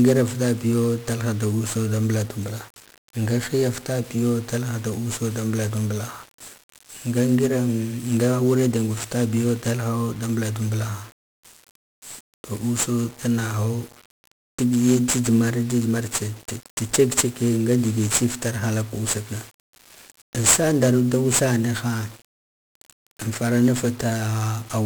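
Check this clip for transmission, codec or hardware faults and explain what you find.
The clip has one codec fault, and it runs through the whole recording. The speech has been coded as 1-bit DFPWM. Each sample carries a single bit. That bit only nudges an adaptive level up or down, so the waveform is traced in coarse steps. The error becomes heavy broadband noise. The speech sounds fuzzy and crackly from start to finish. The upper frequencies sit under a layer of hiss. The noise level points to a stream of about 48 kbps.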